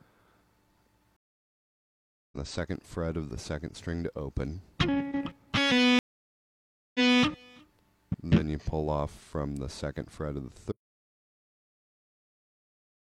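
At 1.16 s the stream breaks for a stream reconnect: about 1.16 s of silence, and the audio resumes at 2.37 s roughly a second further on, so that material is skipped. A second reconnect at 5.99 s gives 0.96 s of silence, then playback restarts at 7.22 s about 0.28 s earlier than where it stopped, repeating a short stretch.

From 10.72 s to the end the audio drops out to silence: the sound cuts off mid-flow into silence with no room tone, most likely a lost input while the recorder kept writing.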